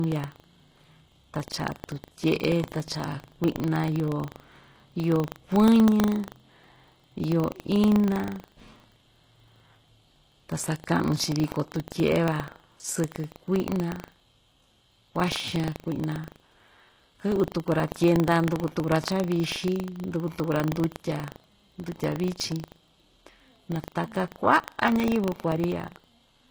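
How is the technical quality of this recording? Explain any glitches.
The technical quality is poor: two faults run through the whole speech recording.

The first, and likely the cause of the synthetic treble, is HE-AAC compression at a very low bitrate, consistent with around 16 kbps. The codec keeps only the lower spectrum and fakes the top end by copying lower bands upward under a rough envelope. Here the rebuilt treble sounds plainly artificial, so s sounds come out gritty and lisped, with a metallic sheen.

The second is buffer tearing, present from start to finish. The software filling the playback ring buffer and the hardware draining it have drifted so their positions cross inside every period. A small slice of each buffer, a couple of percent, still holds audio from about a tenth of a second earlier, spliced in with hard edges. Repeating 25 times a second, these splices make a coarse, robotic buzz that rides on the speech and drops away in pauses.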